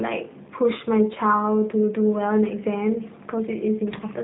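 From start to end, the speech carries G.729 codec damage. Nothing passes above about 3.8 kHz, so it sounds boxed and dull. Rebuilding the voice from a filter, pitch predictor and sparse pulses makes it plainly rough and synthetic, which fits G.729A at 8 kbit/s.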